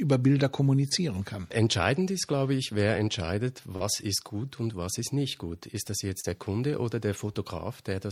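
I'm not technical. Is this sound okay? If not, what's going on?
No. This has short concealed packet loss. Tiny pieces of the stream, about 10 to 30 milliseconds each, arrived too late. The receiver patched each gap by stretching the surrounding sound. You hear brief smears or wobbles at 0.89, 3.76 to 3.81, and 6.20 to 6.25 seconds.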